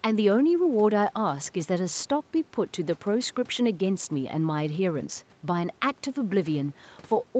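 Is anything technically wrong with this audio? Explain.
No, nothing is technically wrong.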